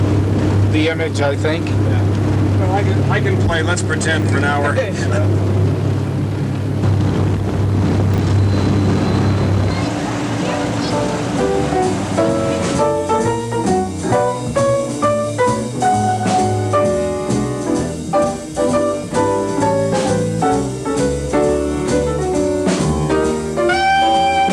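At 4.2 s and again at 8.14 s, chunks out of order: one 20 ms chunk plays a chunk late, producing a brief jumbled blip with hard joins.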